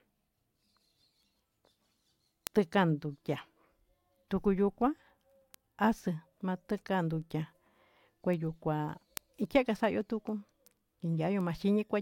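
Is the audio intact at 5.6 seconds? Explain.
No. Steady sharp ticks of uneven strength, roughly every 0.3 s from 0.24 to 11.96 s, cross this point: word clock ticks, from an unlocked receiver clock about 70 ppm off slipping single samples.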